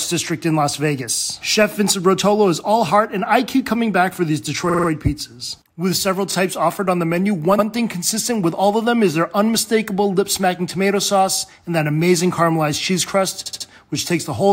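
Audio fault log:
4.69–13.67 s, repeated frames: a short block of the encoded stream plays again in four bursts, at 4.69–4.87 s (a 46 ms block heard four extra times), 6.31–6.33 s (16 ms, once), 7.58–7.65 s (70 ms, once) and 13.45–13.67 s (62 ms, three extra times). Each burst is a stutter, and each adds its repeat time to the running length.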